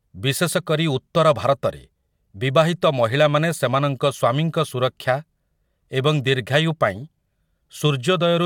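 No technical faults can be heard in this speech.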